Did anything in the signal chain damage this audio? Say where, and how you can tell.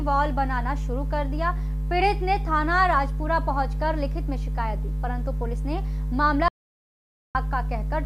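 Yes. There's an audio dropout to silence from 6.48 to 7.35 s, roughly 0.87 s where the sound just stops dead and comes back mid-flow. Tell-tale sign is that the gap is silent, with no room tone or noise floor underneath, so it isn't a quiet passage. The likely culprit is the capture side, a link or input device dropping out while the recorder kept writing silence, so whatever happened in that window is simply gone.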